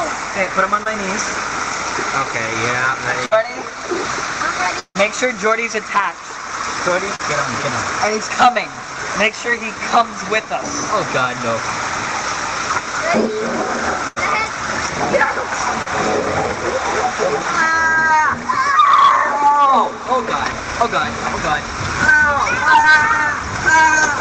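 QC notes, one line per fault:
QC notes, one line per fault:
0.83–0.87, 7.15–7.21, 15.82–15.88, 22.82–22.86 s: short concealed packet loss. 20–40 ms gaps bridged by extending the previous sound, heard as brief smears or wobbles.
3.25–3.33, 14.07–14.18 s: burst of packet loss. About 60 ms and 80 ms lost, filled with a fading continuation of the prior sound, then playback resumes further on.
4.79–4.97 s: long network dropout, likely cause. About 160 ms missing, heard as a decaying buzz or hiss ending in roughly 50 ms of silence before the audio returns.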